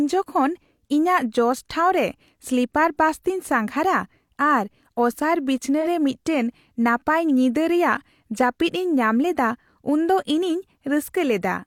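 Right around 5.81 s there's a brief AAC frame loss with concealment, running to about 5.87 s in the speech. About 43 ms of audio went missing, which fits a single lost AAC frame. The decoder papered over the gap by reusing the last good spectrum, scrambling its signs or interpolating its energy, so what you hear is a quick smeared, noisy, phasey blip rather than a clean dropout before the speech picks back up.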